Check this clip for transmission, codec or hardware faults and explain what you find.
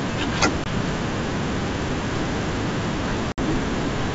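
Two dropouts stand out, both packet loss on an ADPCM call, carried over what sounds like a clean G.722 wideband link at 64 kbit/s.

Packet loss on an ADPCM call hits at 0.64 s, a 20 ms hole, and again at 3.32 s, a 60 ms hole, about three packets' worth. Each gap drops abruptly to silence. Afterward, the decoder's predictor and step size no longer match the sender's, so the speech returns slightly distorted for some tens of milliseconds before settling.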